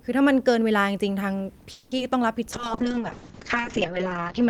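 From 1.71 to 1.93 s there is a call audio freeze. Packets were likely held up in transit, leaving the jitter buffer empty, so the receiver stretched the last sound into a fading buzz for about 200 ms. The audio then resumes where it stopped, nothing lost but now running 200 ms later.

At 1.97 to 2.00 s comes a short concealed packet loss. About 20 ms of the call missed the decoder, and the receiver filled part of the hole by extending the preceding sound before blending back, which comes across as a brief smear or wobble in the audio.

From 2.54 s to the end, a call bitrate drop takes hold. The bandwidth estimate collapsed and the encoder went from 40 kbps down to 6 kbps, holding that low rate for about 1.6 s. The sound turns coarse and watery, and high frequencies above 8 kHz disappear, leaving it muffled.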